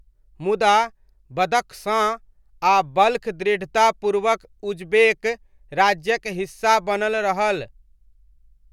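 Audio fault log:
No faults can be heard anywhere in this speech recording. Nothing in it calls for a timed entry in this log.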